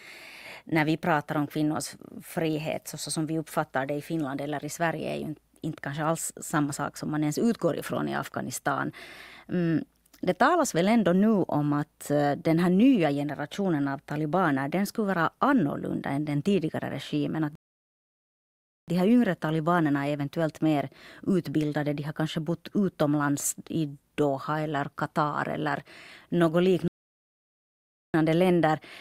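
Twice the player exhausted its downloaded audio and had to halt until more data arrived, a rebuffering stall each time. The speech cuts to silence at 17.55 s and picks up again at 18.88 s, a gap of about 1.3 s, then stops again from 26.88 s to 28.14 s, adding another 1.3 s. Each time the speech resumes exactly where it broke off, with nothing skipped, so the pauses only stretch the clip's running time.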